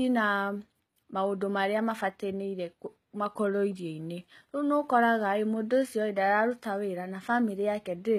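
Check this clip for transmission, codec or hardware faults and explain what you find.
One fault is present across the entire speech recording, and it most likely comes from HE-AAC compression. The damage is plainly audible from start to finish, with sibilants sounding gritty and metallic. The cause is likely spectral band replication. Only the lower spectrum is truly coded, and the treble is patched in by copying lower bands upward under a coarse envelope, which fits a low bitrate around 20 kbps. On a spectrogram, the upper band looks blocky and smeared, its harmonics fail to continue across the crossover, and nothing appears above 14.9 kHz.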